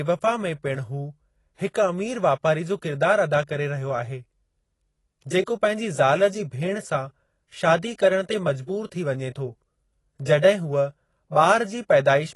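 AAC compression runs through the whole clip, from start to finish: the speech sounds dull and smeared, with nothing above 11.5 kHz and a fizzy, warbling texture on sibilants and held sounds. This is likely AAC-LC coding at a low bitrate, something like 32 kbps. With so few bits, the encoder cuts the top band and quantises the remaining spectrum coarsely against its hearing model, leaving gaps that turn into plainly audible swirl.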